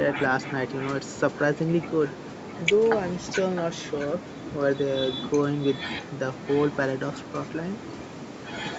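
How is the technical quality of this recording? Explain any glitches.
The recording has a recurring echo leak. A faint, delayed copy of the speech trails it through most of the clip, with a top end that stops around 8 kHz, as expected for a wideband call path.

Echo leak runs from 0.4 to 1.19 s, 1.86 to 2.64 s, 3.19 to 4.79 s, 5.18 to 6.74 s, and 7.16 s to the end. The likely cause is a far end playing the call over a loudspeaker, where the echo canceller failed to subtract everything its microphone picked up. The residue was sent back, so the speech returns about 0.66 s late. The echo is roughly 15 dB down in the first stretch, around 20 dB down through the middle ones, and fainter still, near 25 dB down, in the last.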